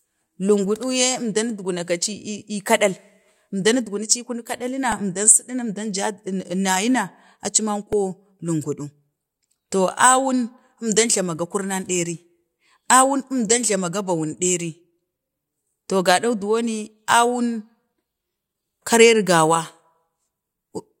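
A speech clip with two brief clicks, at 4.92 s and just after "aci man" at 7.93 s. Each is a repeated buffer: new audio arrived late, so the device replayed its last 1.3 ms block, several times at first, once later, dropping a few milliseconds of sound.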